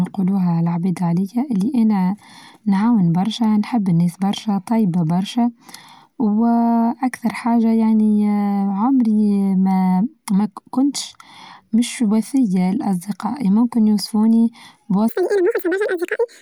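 A speech clip in which the final stretch was likely run against the wrong clock, an editor or player stepping through the samples at twice the intended rate. From 15.09 s to the end at 16.41 s, just after "وفيه لأصدقائى ممكن يوصفوني", this section at the wrong speed plays at 2× speed, so the voice jumps to a hurried, chipmunk-like register roughly ten semitones higher, with timing and pitch shifting together at that instant.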